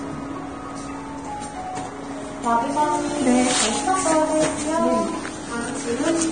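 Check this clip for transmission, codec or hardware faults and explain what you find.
A codec fault runs throughout: likely Vorbis compression at a low bitrate, around 24 kbps by the sound. Nothing survives above 9.7 kHz, and the remaining treble is hissy and grainy because coarse quantisation replaces fine detail with noise. Tones sound roughened and attacks blurred.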